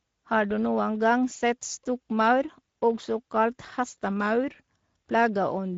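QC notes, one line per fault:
Throughout, Speex codec damage. The speech is plainly degraded by this CELP codec for low-bitrate voice. Voiced sounds come out noisy and hoarse. That happens because too few bits go to the excitation signal that drives the synthesis filter in each short frame. The level of damage points to a mid-quality setting, roughly 16.8 kbps. Nothing is present above 7.6 kHz. The top band that remains sounds like shaped noise rather than real detail.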